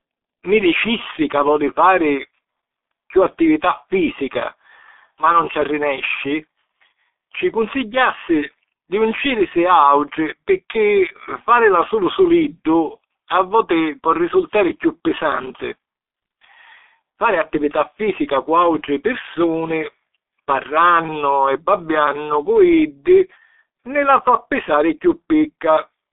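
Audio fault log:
Throughout: G.723.1 codec, heavy damage. Nothing is heard above 3.8 kHz, and the band sits at roughly 250 Hz to 3.6 kHz, so the speech sounds muffled and hoarse. The voice model updates slowly, which blurs consonants, and the rate is near 6.3 kbit/s.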